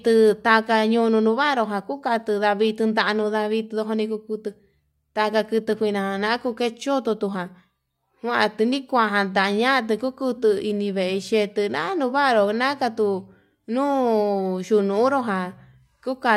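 No technical faults are audible.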